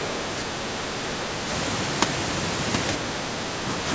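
Right near the end, from 3.26 to 3.34 s, the speech suddenly sinks, plunging by something like 40 dB for about 70 ms before coming back. That sharp, brief gouge is what speech suppressed in double talk sounds like: most likely the far end was talking at the same moment, and the echo canceller, unable to tell this talker from loudspeaker echo, clamped down on everything. The audio tops out around 8 kHz, as you'd expect from call microphone processing.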